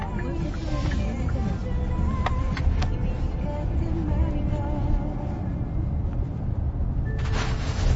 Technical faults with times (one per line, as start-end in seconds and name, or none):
0.00-7.95 MP3 compression